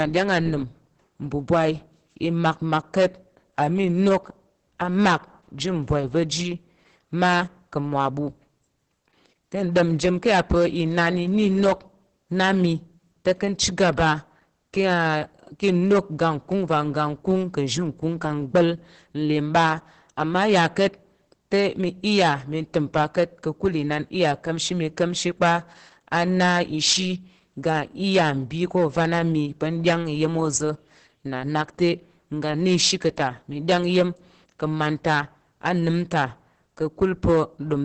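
Hard clipping runs through the whole speech recording: the level is pushed about 15 dB past what the chain can pass, so roughly 3% of samples are sliced flat into harsh, fuzzy distortion. Opus voice compression is also present throughout: the SILK coder's coarse excitation leaves the voice hoarse, muffled and faintly robotic, with nothing above 8.6 kHz, which fits a bitrate near 10 kbps.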